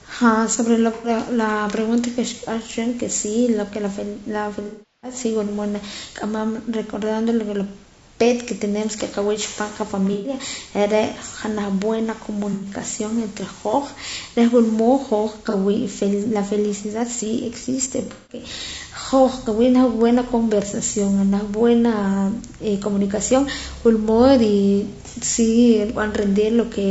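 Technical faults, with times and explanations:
Throughout: low-delay AAC compression. The speech sounds rough and grainy, with a hiss filling the gaps between harmonics and a top end that sounds thinned or slightly synthetic. That fits AAC-ELD at around 32 kbps as the likely cause. Its very short frames can't separate closely spaced pitch harmonics well, so the bits run out quickly and the encoder patches detail with noise and a reconstructed upper band.
0.95–1.09 s, 4.67–5.15 s, 10.13–10.34 s, 12.53–12.67 s, 15.50–15.55 s and 18.05–18.41 s: AAC frame loss with concealment. These are dropouts where the decoder guessed at missing audio by reusing the last good spectrum. The short ones (about 30, 90 and 120 ms) come across as brief smeared, noisy or phasey patches. The 360 ms gap near 4.7 s runs long enough to sag toward silence before recovering. Around 18 s the losses are scattered over about a quarter second, with one run of roughly 200 ms.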